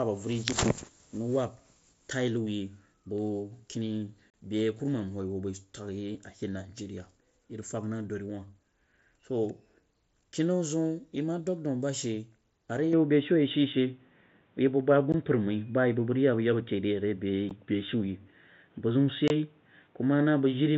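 At 4.31 to 4.34 s, unconcealed Bluetooth headset packet loss drops about 37.5 ms of audio between headset and phone, and nothing fills the gap. The result is a short hole with hard edges that can tick. Three briefer dropouts of the same kind follow, at 15.12 s (15 ms), 17.49 s (15 ms) and 19.28 to 19.30 s (22.5 ms). These are shorter nicks, but just as abrupt.

At 12.93 s, right after "a ri", the input is switched to a poorer device, likely a different microphone or a headset's call profile. There is no gap at the change. Until then the wideband mSBC link carries content up to 8 kHz, with a light grain on loud sounds. After the switch nothing reaches above 3.8 kHz, so the sound turns dull and boxy at once. The level also steps by a few decibels, and a new background noise appears, roughly 40 dB down.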